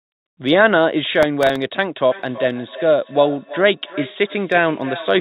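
From 1.23 to 1.56 s the processor falls behind and misses several deadlines for its very short audio buffers, which last roughly a millisecond or two. Each time, a scrap of old audio is replayed in place of the new one, with hard edges at both ends. Over this stretch the misses add up to a gritty processor overload crackle on top of the speech, which stops once the load eases.

From 2.1 s to the end, a second device in the same room is on the call and plays back what this microphone sent. The microphone picks that playback up again. The local echo canceller cannot remove it because it only handles its own device's output. The result is feedback echo between two devices: the speech returns about every third of a second, thinner and more ringing each pass. At its strongest it sits about 15 dB below the speech. Like the rest of the call audio, the repeats have nothing above 4 kHz, which fits a narrowband telephone codec.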